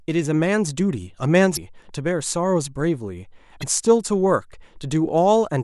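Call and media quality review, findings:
Two short blips in the speech, at 1.53–1.58 s and 3.59–3.64 s, each about 44 ms. Looks like damaged data in a compressed stream. Bad or missing bytes in the encoded frames mean the decoder can't read them cleanly, drops sync and hunts for the next frame header, so you get a brief glitch instead of clean audio. Probable component is the transport or storage path feeding the decoder. Worth checking packet integrity upstream.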